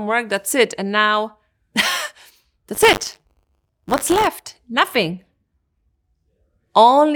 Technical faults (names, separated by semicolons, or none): buffer tearing